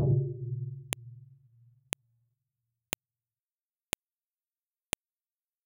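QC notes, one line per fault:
0.93, 1.93, 2.93, 3.93 and 4.93 s, file header played as audio: a sharp, loud click lands at each joint between pieces about 1.0 s long. Each piece's header bytes were left in and play as raw samples, producing a brief snap unrelated to the surrounding sound.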